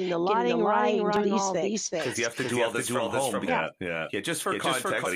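Speech runs through a doubled audio track for its whole length: a second copy of the same speech trails the first by roughly 0.4 s at about the same level, likely because a slower capture path recorded it again or an edit left two copies out of step. Unlike an echo or reverb, the copy doesn't fade or take on any room colour. It is a clean, full-band duplicate at a fixed offset, so every phrase is heard twice. Three short disruptions at 1.16–1.22 s, 3.44–3.50 s and 5.02–5.07 s, each lasting roughly 55 ms, come from damaged data in a compressed stream. Corrupted bytes in those frames make the decoder misread them and lose sync until it finds the next valid frame header.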